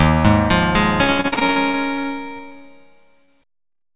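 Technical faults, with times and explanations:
1.04–2.64 s, repeated packet loss (robotic sound): fifteen gaps, the longest 67 ms, were each patched by extending the previous sound, so about a quarter of this stretch turns choppy and robotic.
3.25–3.30 s, short concealed packet loss: about 20 ms arrived too late for the decoder, which continued the preceding sound and then blended back into real audio, leaving a brief smear.
3.72–3.91 s, repeated packet loss (robotic sound): four short gaps, the longest 10 ms, were filled by repeating the last sound, giving a choppy flutter across a third of this span.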